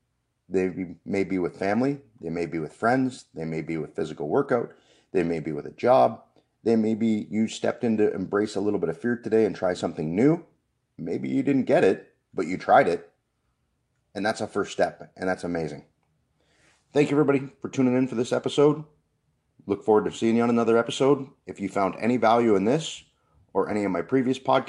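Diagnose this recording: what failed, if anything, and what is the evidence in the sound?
Nothing in the signal chain failed: the speech holds steady level and continuous timing throughout, with no audible damage at any stage between capture and playback.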